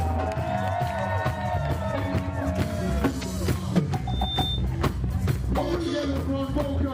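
A loudspeaker feedback squeal runs from 4.07 to 4.66 s: a single 3.6 kHz tone swells over about a third of a second to roughly the level of the surrounding audio. A microphone is picking up its own loudspeaker, and the loop gain exceeds unity at that frequency.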